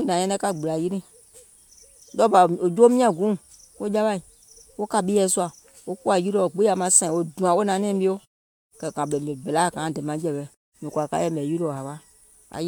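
No technical faults are audible in this speech clip, and the background falling away in the pauses is the gate doing its normal job.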